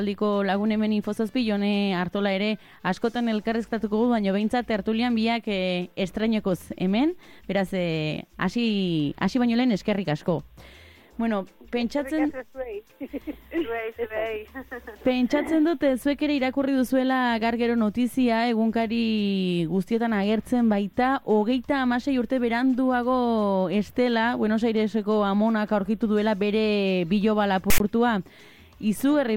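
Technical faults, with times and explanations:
27.70–27.80 s, file tags played as audio: a block of text tags with zero padding was decoded as if it were samples. The text bytes become a loud rasp pushed to one side, the padding drops to silence, and the 0.1 s burst starts and stops with hard edges.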